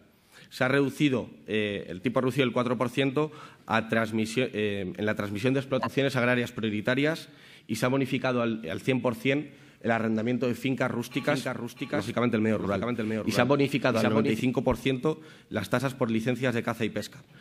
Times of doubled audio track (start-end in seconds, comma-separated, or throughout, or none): 11.24-14.40